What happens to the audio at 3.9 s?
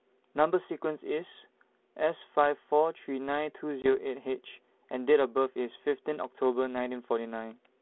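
Packet loss on an ADPCM call hits the speech from 3.82 to 3.98 s. About 20 ms, roughly one packet, drops out as a hard-edged silence. The decoder's predictor and step size then disagree with the sender's, so the speech returns slightly distorted and settles within tens of milliseconds.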